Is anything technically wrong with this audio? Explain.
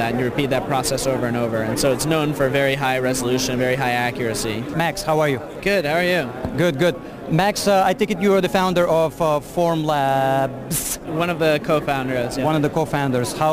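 Yes. Sample clock jitter runs throughout: timing errors of roughly ten microseconds smear steep waveform slopes, adding a hiss about 20 dB below the sound that swells on loud, bright passages.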